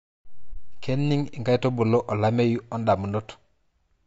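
Low-delay AAC compression runs through this speech recording: the short transform frames resolve the pitch harmonics poorly, so the voice sounds plainly rough and grainy, with noise filling the gaps between harmonics. This is likely the AAC-ELD codec used in video calls, at a bitrate around 32 kbps. AAC frame loss with muting occurs from 0.53 to 0.57 s. The decoder zeroed a missing block of spectrum, and the overlapping windows fade the sound out and back in, leaving a brief dip of about 30 ms, which fits a single lost frame.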